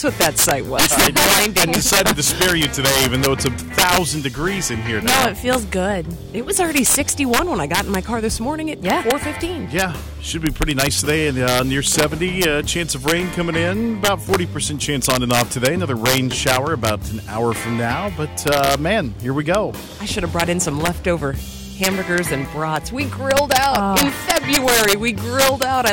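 Throughout, integer overflow: with about 9 dB overdrive, the few peaks past the limit wrap to the opposite sign, giving violent cracks far harsher than clipping's flattened tops.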